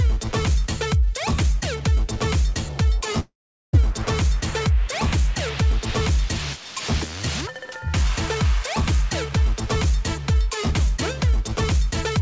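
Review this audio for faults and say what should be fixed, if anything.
From 3.20 to 3.75 s, a long network dropout, likely packet loss, stretches the last sound into a fading buzz, then about 0.4 s of silence before audio resumes with roughly 0.54 s gone. On a spectrogram it appears as a smeared, decaying band dropping to blank; the waveform flattens to a line. Nothing shows above 8 kHz there, as across the G.722 call path. Stabilising the network link and enabling forward error correction or packet redundancy would prevent it.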